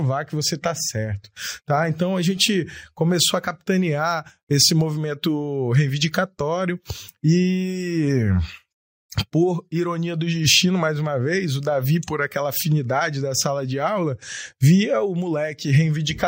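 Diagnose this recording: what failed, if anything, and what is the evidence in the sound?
Nothing failed; no fault is audible in this recording.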